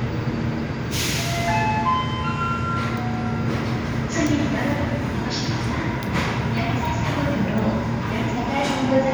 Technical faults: none

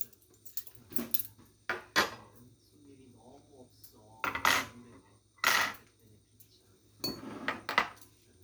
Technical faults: none

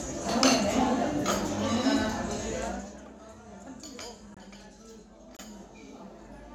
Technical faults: zipper noise; corrupt frame muted

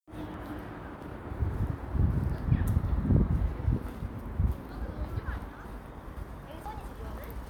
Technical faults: dropped buffer (overrun)

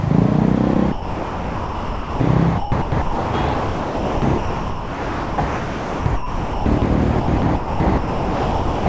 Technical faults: sound chopped by the voice detector

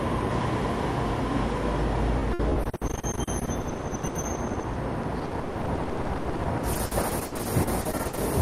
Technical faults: repeated packet loss (robotic sound)

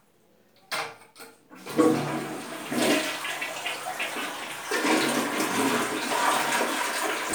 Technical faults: none

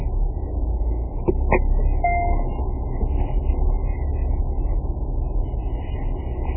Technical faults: MP3 compression

